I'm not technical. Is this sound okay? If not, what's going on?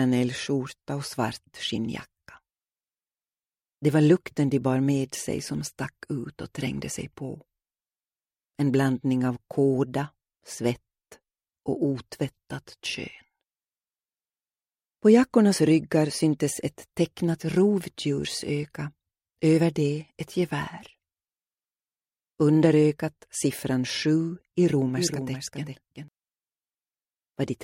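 No. Near the end, from 24.74 to 26.08 s, the audio was most likely captured twice, with a second, slower path adding its own copy. This creates a doubled audio track: a quieter repeat trails the original by about 0.4 s, then stops abruptly.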